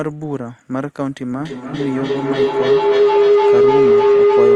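Speech recording with a feedback howl from 1.38 s to the end. A microphone-to-loudspeaker loop, with repeats about 0.3 s apart, builds a tone near 400 Hz that peaks about 10 dB above the speech. On a spectrogram it shows as a bright horizontal line, and the waveform swells.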